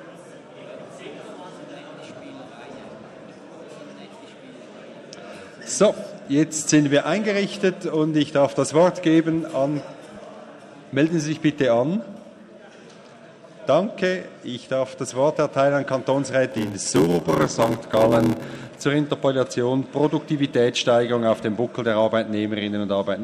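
From 16.51 to 18.84 s there is a block size mismatch (padded), which fits 512-sample blocks filled partly with zeros. The short gaps, repeating at 86.1 Hz, produce a buzz, and the sound drags to 0.861 of normal speed while keeping its timbre, unlike resampling faults, which shift pitch.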